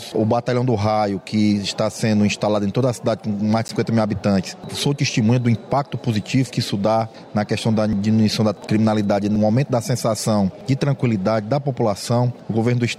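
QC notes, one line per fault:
3.68 s and 8.67 s, block of digital silence: the output buffer was likely not filled in time, so about 10.7 ms of samples, which fits a 512-sample buffer, went silent each time. The abrupt cut and return is heard as a brief tick.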